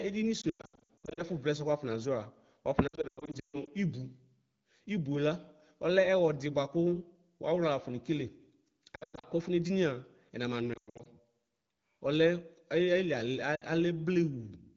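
From 0.41 to 1.23 s, 2.87 to 3.68 s, 8.95 to 9.26 s, 10.73 to 11.08 s and 13.55 to 13.64 s, the wideband speech shows lost AMR speech frames. The decoder stretches the last good sound, which warbles and fades quickly, longest near 140 ms.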